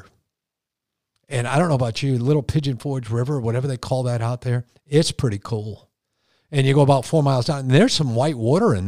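No technical faults are audible.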